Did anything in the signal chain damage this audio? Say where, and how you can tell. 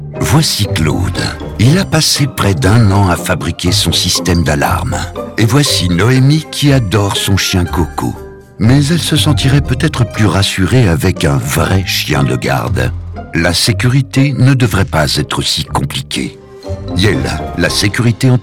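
Yes. Hard clipping runs through the whole clip: peaks are cut flat, giving crackle on the loudest moments. The signal was driven about 9 dB past what a converter or fixed-point stage could pass, so around 2 percent of samples hit the ceiling.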